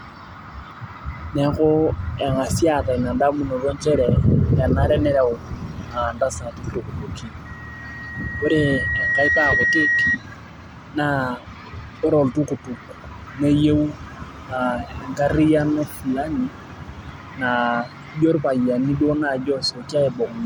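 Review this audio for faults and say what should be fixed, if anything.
There's a loudspeaker feedback squeal from 7.45 to 10.18 s. The mic is hearing its own speaker, and at 1.9 kHz the loop gain tops one, so that tone swells over about two seconds until it sits roughly 5 dB above the speech. To prevent it, lower the monitor gain, move the mic off-axis from the speaker, or notch out 1.9 kHz.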